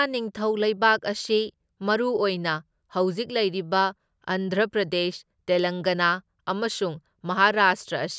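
No technical faults can be heard anywhere in the recording.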